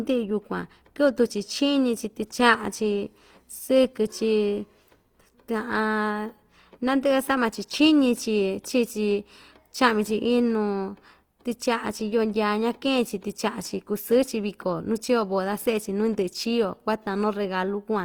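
Throughout the speech, plainly audible Opus compression is likely the cause of a grainy, rough texture. Starved bands seem filled with noise, so tones turn hissy instead of swirling. Bandwidth stays full, reaching about 20.2 kHz. The damage fits roughly 24 kbps.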